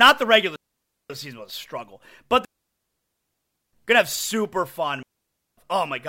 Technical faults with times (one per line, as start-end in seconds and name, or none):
0.56-1.10 digital wireless dropout
2.45-3.73 digital wireless dropout
5.03-5.57 digital wireless dropout